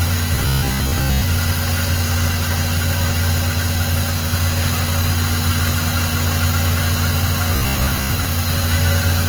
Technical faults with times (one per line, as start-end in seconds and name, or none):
0.00-9.28 Opus compression
0.35-1.22 robotic sound from repeated short buffers
7.56-8.25 robotic sound from repeated short buffers